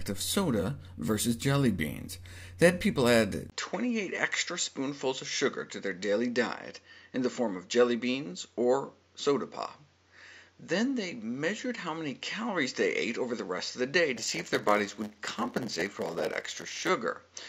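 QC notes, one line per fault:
3.50 s to 17.48 s, input switched to a poorer device: after a 20 ms dropout the sound turns duller and a few dB quieter, with a narrower band and a faint new background noise roughly 40 dB down. This likely comes from recording switching to a narrower-band microphone with its own noise floor.
14.16 s to 16.90 s, block size mismatch (padded): a steady 100 Hz buzz rides on the audio, which also drags to 0.919 times normal speed while keeping its timbre. Shorter blocks are zero-filled to a longer read size, inserting a gap in every block at that rate.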